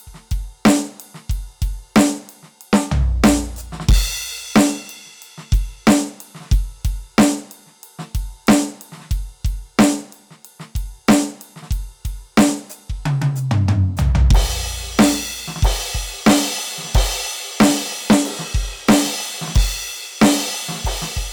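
Hard clipping runs through the whole music clip. The signal was driven about 13 dB past what the stage could pass, so roughly three percent of samples hit the ceiling and were cut flat. Those flat tops add high harmonics, heard as a harsh fuzz on every loud passage.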